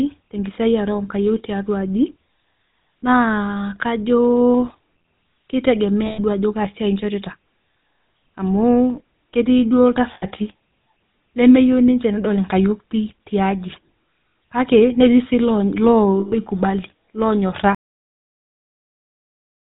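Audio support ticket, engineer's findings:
GSM full-rate codec, whole clip. Buzzy, gravelly roughness on the speech and nothing above 4 kHz. Probable component: GSM full-rate codec in the voice path. The vocal tract is modelled and driven by regularly spaced pulses that keep only every third excitation sample, so fine detail is lost. Damage plainly audible, consistent with the 13 kbps full-rate mode.

Lost GSM frames, 6.06 to 6.19 s, just before "duo ajo kaa siai". A 120 ms rough, metallic ring, which fits six dropped 20 ms frames. Probable component: GSM receiver frame substitution. The decoder repeats the last good frame's parameters at falling level.
Same fault, 10.14 to 10.26 s, right after "ketii duo". An 80 ms ring, fitting four lost frames.
Same fault, 16.20 to 16.36 s. A 120 ms ring.

Cut-off end, 17.75 s. The speech stops mid-sound and drops straight to digital silence with no decay, and the silence runs for about 2 s to the end. 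Probable component: playback or recording buffer handling. The final buffers were never written or played out.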